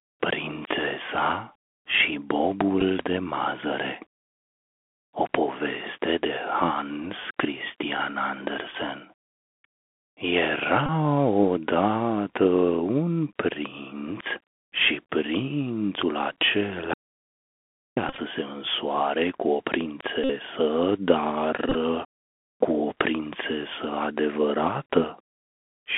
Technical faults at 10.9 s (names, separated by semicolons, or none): Bluetooth CVSD headset codec; Bluetooth headset packet repeated